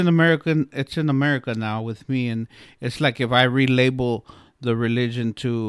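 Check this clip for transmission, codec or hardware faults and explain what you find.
Had a good listen to this bit of speech, and there's nothing in it worth flagging.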